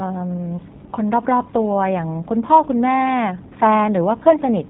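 From start to end, the speech carries G.729 codec damage, plainly audible. The sound is rebuilt from a vocal tract model, pitch prediction and sparse pulses, which fits G.729A at 8 kbit/s. Nothing above 4 kHz survives. The speech sounds rough and synthetic.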